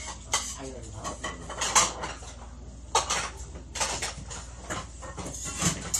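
Right from the start and all the way through, these sounds carry two layers of compression damage at once, which points to transcoding between lossy codecs. The pattern fits a low-rate MP3 pass of around 47 kbit/s being re-encoded as HE-AAC at about 48 kbit/s. The second encoder likely spent its bits preserving the first one's smearing and swirl. It then layered its own synthetic-sounding top end over that, leaving the dullest cut-off in the chain in charge.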